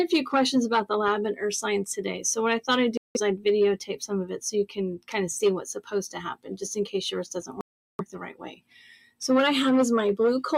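A speech-tuned noise suppressor was left running on this non-speech audio, and it pumps the level up and down by around 10 dB throughout. It reads steady tones, ambience and reverb tails as noise, so sustained parts sag while attacks pass. On a waveform the envelope breathes unevenly, with each onset standing tall and the body behind it shrinking. A spectrogram shows held partials and diffuse energy fading in patches rather than decaying smoothly.

The suppressor goes further in two places, turning sound down harder. From 6.34 to 6.54 s, and again across 7.47 to 9.22 s (about a second of that stretch affected in total), steady or decaying material drops by up to about 20 dB, clipping tails short while transients survive. Visually these are deeper holes carved into the sustained energy: the spectrogram's horizontal bands thin or vanish, and the waveform narrows sharply between surviving peaks.

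There are also two hard dropouts to silence, most likely Bluetooth stalls in which radio interference delayed packets until the headphone buffer emptied. The first lasts 177 ms, from 2.97 to 3.17 s. The second lasts 382 ms, from 7.61 to 8.01 s, inside the longer suppressed stretch. Playback resumes abruptly after each. On a waveform each is a flat line with squared edges, and on a spectrogram a clean vertical gap that is empty at every frequency, quite unlike the suppressor's partial, frequency-selective dips.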